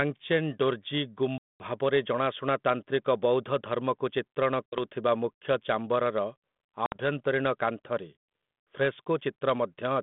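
Packet loss on an ADPCM call breaks this telephone speech recording at 1.38 to 1.63 s, 4.67 to 4.80 s and 6.86 to 6.98 s. Each is a hard-edged silent hole, the first about 220 ms long and the others about 60 ms, which fits a run of around ten packets and then two short runs of a few. Because the G.726 decoder, running at 32 kbit/s within a 150 Hz to 3.6 kHz line band, predicts each sample from the last and adapts its step size, the missing data leaves its predictor and step size out of step with the sender's.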